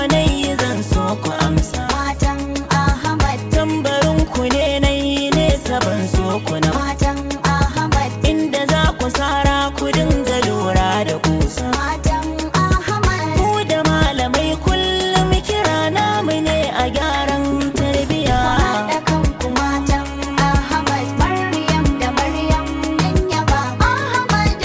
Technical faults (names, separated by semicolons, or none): skip ahead; jitter buffer speed-up